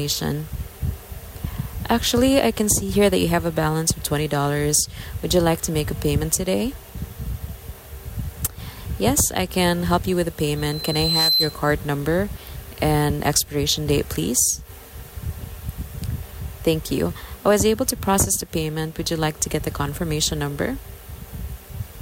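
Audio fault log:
10.57–11.60 s, loudspeaker feedback squeal: a single piercing tone at 4.1 kHz swells out of the sound over roughly 0.7 s until it sits about 5 dB above it, then stops. The microphone was hearing its own loudspeaker, and at that frequency the loop gain exceeded one.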